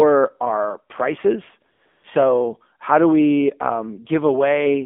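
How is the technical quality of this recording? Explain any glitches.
The recording has clearly degraded technical quality: the whole clip passed through a narrowband mobile speech codec, and there are two brief comfort-noise patches in a pause.

AMR narrowband mobile codec: Throughout, the speech sounds plainly buzzy and synthetic, confined to roughly 250 Hz to 3.5 kHz. AMR-NB rebuilds the voice from a vocal-tract model and a few pulses per 5 ms, and the audible damage fits a low rate around 7.4 kbps.

AMR comfort noise: Just after "our prices," from 1.72 to 1.82 s and again from 1.86 to 2.04 s, the real background is replaced by a smooth, steady hiss that switches in and out. The phone treated the talker as silent, sent no speech frames for 100 ms and then 180 ms, and the receiver filled each gap with synthetic noise.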